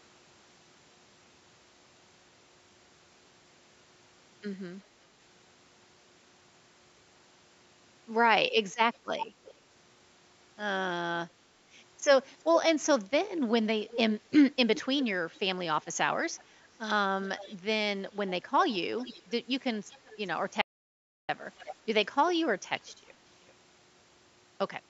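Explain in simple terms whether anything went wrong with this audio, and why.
Two things go wrong in this speech recording.

First, there's an echo leak. A faint, delayed copy of the speech trails the talking by just under 0.4 seconds, at 8.94 to 9.54 s, 13.86 to 13.98 s, 14.76 to 15.4 s, around 16.4 s, 17.24 to 17.56 s, 18.27 to 19.31 s, 19.9 to 20.17 s and 21.58 to 21.75 s. It comes and goes in scraps, sometimes quite noticeable and sometimes barely there. The likely cause is someone on the call using a loudspeaker whose echo canceller didn't fully scrub the sound its microphone picked up, so that leftover got sent back.

Second, there's an audio dropout to silence from 20.62 to 21.29 s, roughly two-thirds of a second. The sound just cuts out, and the gap is completely dead, with no background hiss or room sound at all. That points to the input being lost for a moment while the recording kept writing pure silence, so whatever was said in that stretch is gone for good.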